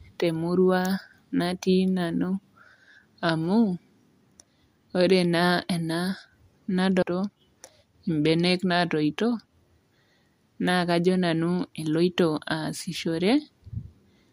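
Speech clip with a jump ahead at 7.02 s, where the sound cuts abruptly with a brief blip and resumes further along, leaving part of the programme missing. This is likely a stream segment skipped, the player moving on to the next segment after one failed to load. On a waveform the envelope breaks sharply at that point; a spectrogram shows a thin vertical broadband line with mismatched content on either side.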